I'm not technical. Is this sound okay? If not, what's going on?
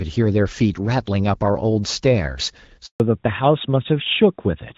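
No. At 2.86 s the speech suddenly drops out and stays silent until 3.00 s, a gap of about 140 ms. This is a handover gap: the phone switched the call from one network to another, and no speech got through during the switch.

From 3.00 s to the end, the speech sounds duller, thinner and rougher, as if heard through an older phone. This is a fallback to narrowband: after the switch, the call left clear HD Voice for an older system that drops every sound above 4 kHz.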